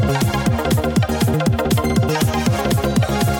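Throughout, the audio was read two samples at a time, at double speed: paired samples form one frame, so everything runs twice as fast, an octave higher, with the spectrogram's harmonics stretched upward.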